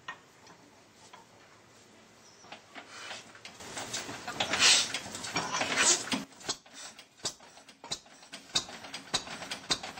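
The audio has two sudden gain jumps: about 12 dB louder from 3.6 to 6.24 s, and about 6 dB louder from 8.32 s to the end. Background noise steps up with the sound instantly, unlike an AGC's gradual ramp, likely from an unramped digital gain change.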